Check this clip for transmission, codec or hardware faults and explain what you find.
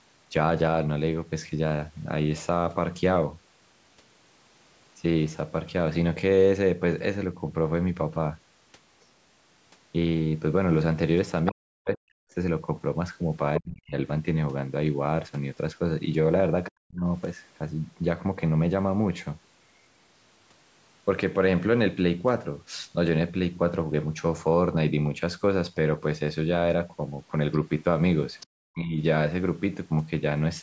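Two connected echo-canceller problems show up in this speech, both around moments when the far end is talking at the same time.

Other side's voice leaking through: at 11.46 s and again at 28.40 s, a brief scrap of a second voice pokes through for a few tens of milliseconds. The first is fairly prominent, roughly 10 dB under the main speech. The second is much fainter, around 25 dB down. The likely cause is the talker's loudspeaker feeding back into the mic, with the echo canceller failing to scrub all of it out.

Speech suppressed in double talk: right after those leaks and in between, the main voice gets pushed way down, by something like 40 dB at its deepest. That happens from 11.51 to 12.32 s, 13.59 to 13.96 s, 16.69 to 17.03 s, and 28.53 to 28.98 s. Each dip lasts from about a third of a second to about eight-tenths of a second, so the talker's voice drops away in those stretches. This is likely the canceller getting confused by both sides speaking at once and clamping down on everything.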